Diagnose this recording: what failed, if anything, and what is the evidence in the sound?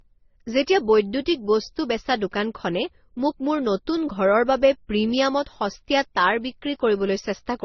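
The codec stage failed: throughout the speech, nothing sounds above 6.1 kHz, which shows as a flat ceiling on a spectrogram, and different artefacts overlap. This points to a low-bitrate MP3 re-encoded through Opus and then AAC-LC, likely transcoding between lossy codecs.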